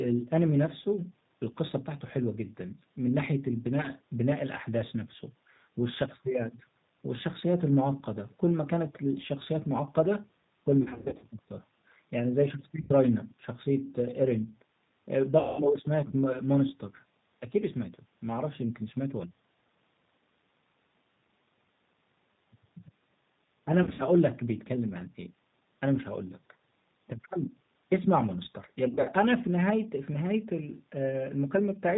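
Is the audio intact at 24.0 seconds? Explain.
No. From 23.83 to 24.05 s the call suffers VoIP packet loss concealed by the speech codec. About 120 ms of audio went missing in gaps scattered over 160 ms, the longest lasting 60 ms, which fits roughly six lost 20 ms packets. The decoder fills each gap by repeating its last pitch and filter at falling gain, so the sound smears into a fading buzzy tone or coloured noise rather than dropping to silence as a plain dropout would. It stays weak for a moment after the packets resume.

Around that moment, and throughout, the G.729 codec at 8 kbit/s is plainly audible. It rebuilds the sound from a filter, a pitch predictor and a few pulses per frame, giving a rough, synthetic texture and cutting everything above 4 kHz. The 4 kHz ceiling comes from the codec. The synthetic grain, not mere dullness, separates it from simple low-pass filtering.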